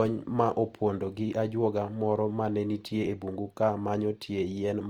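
From start to end, the speech has most likely passed through Opus compression in its music (CELT) mode, with too few bits to describe each band precisely, a starvation that fits a rate around 24 kbps. The encoder keeps each band's overall energy but fills detail by folding lower bands or adding noise, so the bandwidth stays full while the sound turns rough, grainy and noisy, a plainly audible damage across the whole clip rather than swirling gaps.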